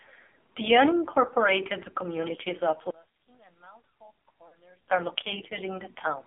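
Throughout, the AMR narrowband mobile codec confines speech to roughly 300 Hz–3.5 kHz. Its heavy buzzy, synthetic damage fits a low 5.9 kbps mode. A spectrogram shows empty bands above and below.

From 2.91 to 4.88 s, the level drops about 28 dB, leaving a faint residue. This is likely one channel inverted, cancelling in mono, and the waveform visibly collapses.

From 4.48 to 4.55 s, lost AMR speech frames cause a drawn-out, fading warble that fits two missing 20 ms frames, 40 ms concealed. The spectrogram shows smeared, decaying harmonics.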